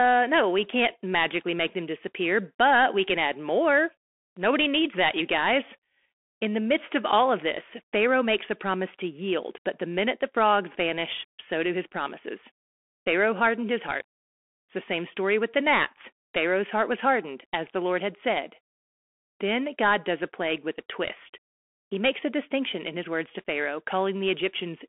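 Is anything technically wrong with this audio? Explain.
Yes, the whole clip has gone through a Bluetooth CVSD headset codec. Nothing gets past about 3.8 kHz, so the speech sounds boxed-in and phone-like. Each sample is coded as a single up-or-down step that adapts too slowly, which fits a 64 kbps link, so loud bright moments distort, s sounds turn scratchy, and a grainy hiss sits underneath.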